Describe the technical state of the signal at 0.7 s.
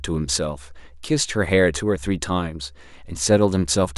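At 0.7 s the signal is intact, with no audible technical fault.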